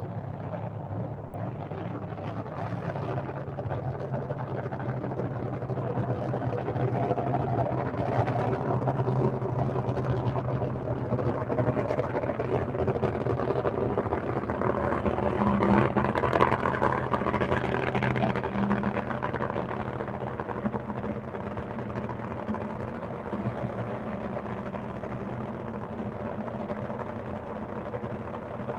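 A recording of everyday sounds carries two faults. A noise suppressor built for speech stays active throughout, treating sustained sound, ambience and decay as noise. Level therefore swings by roughly 5 dB, with onsets passing while held parts and tails sink, so the sound pumps and thins. From 1.27 to 1.31 s, the sound was likely dropped by the voice detector, which judged it background and stopped sending, a pattern that fits Opus discontinuous transmission. About 40 ms of audio gives way to comfort noise before the sound resumes.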